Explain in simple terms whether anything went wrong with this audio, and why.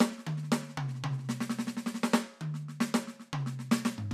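Nothing went wrong with this music.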